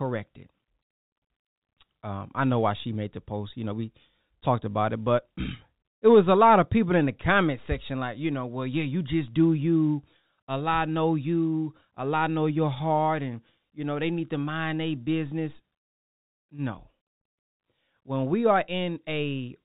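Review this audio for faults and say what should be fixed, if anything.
Nothing needs fixing: the speech is intact throughout, with its narrow telephone-band sound matching ordinary G.711 mu-law coding, where nothing above 4 kHz passes and the faint level-following quantisation hiss stays well below the speech.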